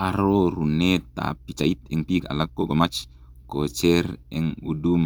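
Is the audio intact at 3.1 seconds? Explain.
No: a time-stretched section spans 1.27 to 3.17 s, likely from software squeezing the speech to 1.69× pace at unchanged pitch. It sounds rushed, with tightly packed syllables and splice seams on a spectrogram.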